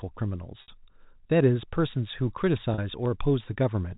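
At 0.62 s, packet loss with pitch repetition bridges a 60 ms gap. The last pitch period loops, giving a brief, slightly held buzz before the speech resumes. From 1.06 s to 3.06 s, clock drift buffer slips recur once a second. Each one is a click, heard about three times. The likely cause is two clocks disagreeing by a few hundred parts per million, so a small block of samples gets dropped or repeated. At 2.74 s, a shorter 40 ms packet loss with pitch repetition produces the same held, buzzy tone. It is briefer than the first.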